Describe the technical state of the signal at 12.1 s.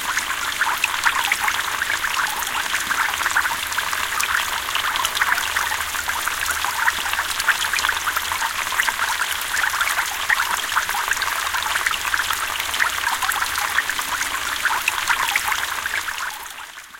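At 12.1 s the signal is intact, with no technical fault present at that moment.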